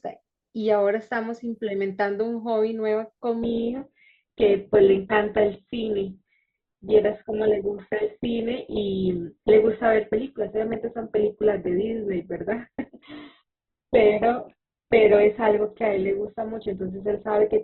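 At 3.42 s the adaptive stream drops to a lower bitrate. Treble vanishes above about 4.1 kHz, and the speech carries more codec artefacts through the end.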